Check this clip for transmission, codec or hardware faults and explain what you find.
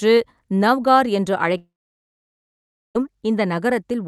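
One transmission fault stands out.

From 1.57 to 2.97 s, after "நௌகர் என்று", a long network dropout, likely from lost packets: a fading buzz, then about 1.3 s of silence. Unlike a brief glitch, the missing audio never returns.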